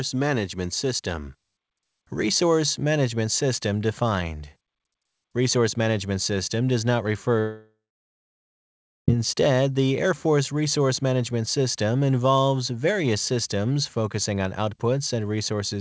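From 7.40 to 9.10 s the speech decays into a fading buzz or hiss, then about 1.3 s of silence, and resumes with a section lost, likely a long network dropout. The G.722 call path at 64 kbps leaves nothing above 8 kHz.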